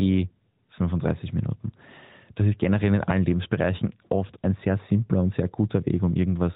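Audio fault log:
No faults are audible anywhere in this speech.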